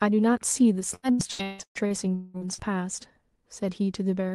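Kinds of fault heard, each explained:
Repeated packet loss (robotic sound): Between 0.95 and 2.61 s, packets kept arriving late or not at all, opening nine gaps in quick succession, the longest 196 ms. Each hole was patched by stretching the last good sound, so about half of that span, roughly 0.81 s, is synthetic fill. The result is choppy, robotic speech with pieces missing, heard through the call path's Opus coding.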